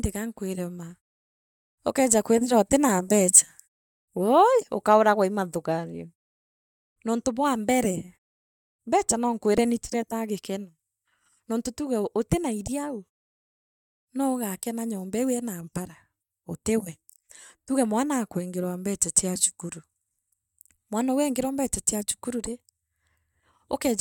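No technical faults are audible.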